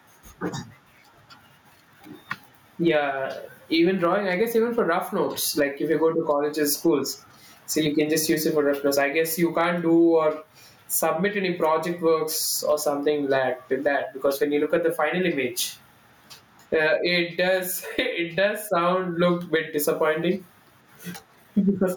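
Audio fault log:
Throughout, gain pumping: loud and soft parts are pulled closer in level and the sound is squashed, with a level swing of roughly 20 dB, likely from input gain set far too high and a fast limiter clamping it.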